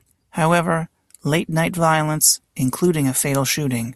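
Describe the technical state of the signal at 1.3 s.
At 1.3 s the speech signal is intact, with no dropout, distortion, glitch or other fault to be heard at that moment.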